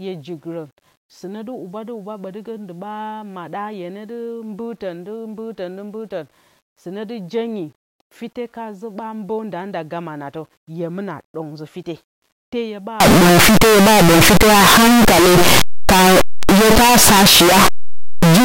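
From 13.00 s to the end at 18.45 s, the speech turns into loud, harsh distortion, and the quiet stretches blast as hard as the rest. That's likely signed and unsigned mixed up on the 8-bit samples: the top bit flips, so every zero crossing leaps across the full range.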